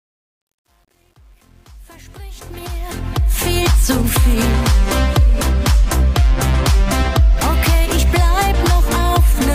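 From the start to about 3.54 s, the opening fade-in sounds gritty and granular. The quietest stretch, up to about 2.36 s, is the grittiest before the level rises clear. This is truncation distortion on a fade: the gain stage kept too few bits and added no dither, so near the bottom of the fade the waveform collapses into a handful of square steps. The coarseness points to roughly 9-bit resolution.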